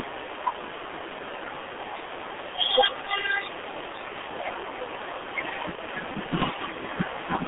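Throughout, the speech carries heavy G.723.1 codec damage: a 300 Hz to 3.5 kHz band and coarse, slowly updated modelling, fitting a 6.3 kbit/s rate, leave it muffled, hoarse, with smeared consonants. From 5.75 to 5.80 s, VoIP packet loss concealed by the speech codec fills a gap of about 30 ms, consistent with one lost frame, by extending the previous pitch and filter, producing a brief, fading smear.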